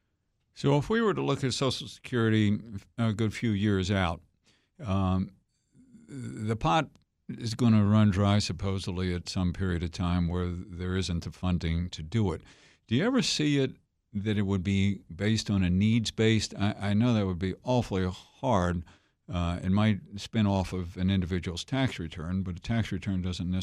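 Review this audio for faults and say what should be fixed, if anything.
No faults; nothing to fix.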